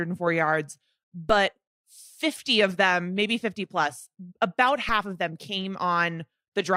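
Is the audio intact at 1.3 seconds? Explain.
No. At about 1.30 s there is a DC step: the waveform's zero line abruptly jumps by about -24 dBFS, as if an offset were suddenly switched into the signal path. A 5 Hz high-pass makes the offset decay back toward zero. The step is heard as a low thump while the speech continues unaffected. On the waveform, the whole trace lifts off its centre line and slowly sags back. A spectrogram shows a brief vertical smear concentrated at the lowest frequencies.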